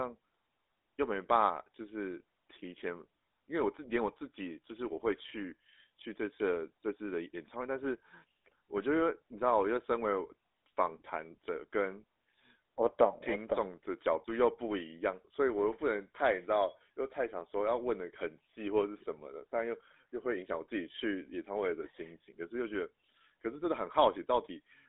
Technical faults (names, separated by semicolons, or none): GSM full-rate codec